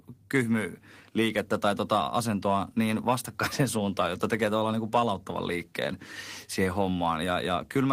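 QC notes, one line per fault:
No faults detected in this clip.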